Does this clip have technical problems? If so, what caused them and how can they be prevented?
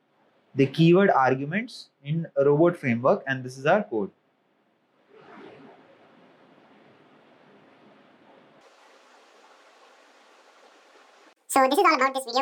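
Yes. From 8.61 s to the end, the audio is read two samples at a time, causing double speed. Each pair of samples is taken as one frame. The sound runs 2x fast and 12 semitones higher. Match the reader's channel count and sample width to the stream's format.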